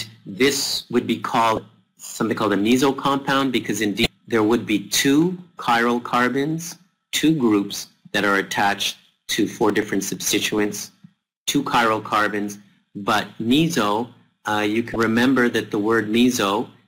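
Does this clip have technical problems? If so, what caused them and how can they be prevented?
Yes. Damaged data in a compressed stream causes three short glitches, from 1.54 to 1.58 s, 4.03 to 4.06 s, and 14.93 to 14.96 s. Each lasts about 30 ms and is heard as a brief chirp or blip. Bytes in the encoded stream were lost, zeroed or overwritten. The decoder misreads those frames, loses sync, and hunts for the next valid frame header. Check transfers and storage with checksums, and carry metadata outside the audio frames.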